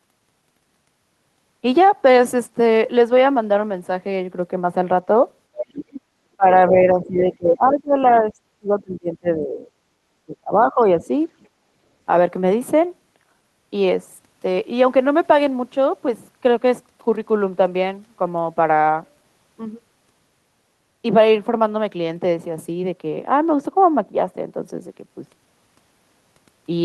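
From 5.57 to 6.01 s, the other side's voice leaks through, fairly loud. The echo canceller likely left loudspeaker sound in the microphone. Speech is suppressed in double talk at 6.37 to 6.54 s and 6.7 to 9.65 s. The voice dips by around 25 dB, likely because the canceller turned down both sides at once. A faint scrap of echo leaks in at 8.05 to 8.13 s. A deeper dip follows at 10.27 to 10.8 s, then a slight one at 10.98 to 11.09 s. A barely audible trace of the other side comes through at 11.41 to 11.47 s.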